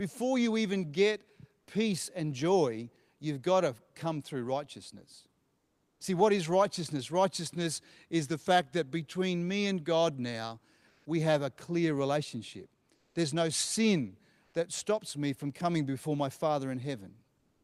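At 5.59 s after "to come through righteousness", 10.87 s before "we have a clear", 12.97 s after "have a clear relationship" and 17.41 s, comfort noise in place of the background: pauses become steady, featureless hiss, about 7, 0, 5 and 3 dB quieter, likely Opus DTX filling untransmitted gaps.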